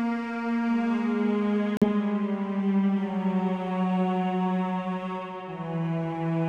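A Bluetooth stall interrupts the music at 1.77 s and runs to 1.88 s, with 46 ms of dead silence inside it. The music drops out and returns. The likely cause is radio interference delaying packets until the headphones' buffer emptied and playback waited for retransmissions.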